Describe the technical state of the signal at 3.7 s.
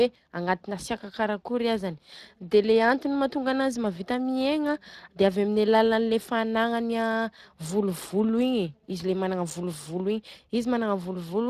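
At 3.7 s the speech carries Speex codec damage, as it does throughout. The CELP coder lacks bits for the excitation, which fits a bitrate near 22 kbps, so speech sounds noisy and hoarse. On a spectrogram, harmonics look grainy and smeared, with nothing above 15.3 kHz.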